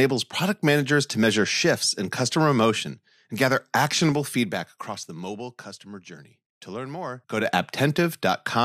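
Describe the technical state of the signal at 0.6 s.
At 0.6 s the speech signal is intact, with no audible fault at that moment.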